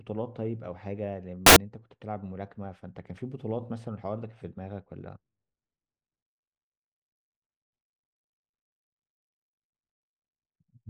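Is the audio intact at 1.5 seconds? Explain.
No, it isn't. From about 1.46 to 1.56 s the speech drops out under a burst of loud, harsh broadband noise, roughly a tenth of a second long. That's samples built from the wrong bytes: the reader is stitching each sample together out of the wrong bytes, whether shifted by one, swapped or misaligned. The rapidly changing low bits end up as the big part of every value, so for that stretch you hear harsh noise instead of the signal.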